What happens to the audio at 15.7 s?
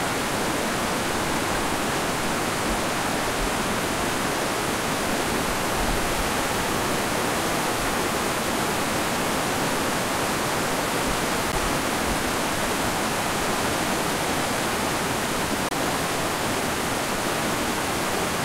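A likely Bluetooth stall: delayed packets drained the headphones' buffer, so from 15.69 to 15.73 s the sound drops into 25 ms of silence, then resumes.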